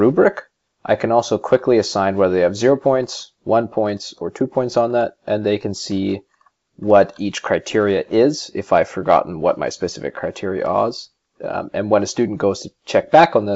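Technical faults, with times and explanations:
The signal shows no technical faults: it has come through a call path whose content stops at about 7 kHz, a wideband limit consistent with G.722 at 64 kbps.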